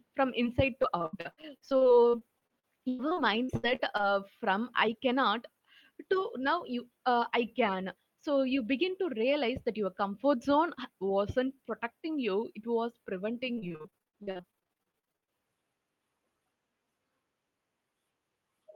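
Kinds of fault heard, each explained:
short concealed packet loss: At 0.43 to 0.47 s, about 20 ms of speech failed to arrive and the decoder stretched the preceding sound over the hole. It is a single brief smear or wobble, quickly rejoining normal audio, unlike the sustained choppiness below.
repeated packet loss (robotic sound): From 0.83 to 4.05 s (24 gaps, longest 99 ms) and 13.53 to 15.29 s (30 gaps, nearly half concealed), holes keep recurring before recovery, so patched fragments chain into robotic, broken speech rather than one isolated glitch.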